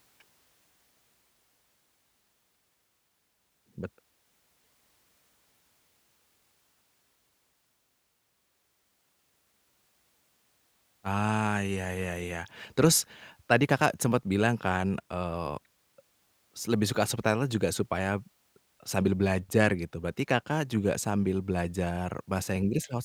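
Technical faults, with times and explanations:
No technical faults detected in the speech recording.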